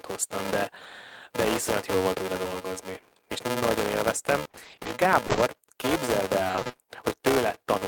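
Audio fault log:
throughout: filter restarted on every block. Each block starts from a reset state, adding a level-following buzz at 375 Hz, which fits a 128-sample block. A spectrogram shows evenly spaced vertical ticks.
4.43–4.87 s: repeated packet loss (robotic sound). Eleven gaps of up to 20 ms, half the span patched by continuation, sound choppy. The waveform shows repeated flattened, looped stretches.
5.27–5.39 s: short concealed packet loss. Three back-to-back holes at 5.27, 5.31 and 5.35 s, each filled with about 20 ms of extrapolated sound, smear briefly. A spectrogram shows smoothed, blurred patches.
6.47–6.79 s: repeated packet loss (robotic sound). Eight gaps of up to 20 ms, concealing half the span, give a choppy sound with pieces missing. A spectrogram shows a regular striped pattern of repeated frames.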